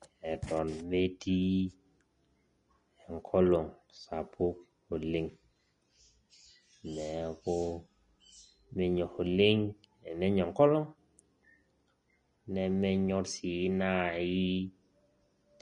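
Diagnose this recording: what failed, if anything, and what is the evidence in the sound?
Grainy, hissy speech throughout, with nothing above 10.6 kHz: a codec stage, likely Vorbis compression at a low bitrate, turning coarsely quantised treble into noise.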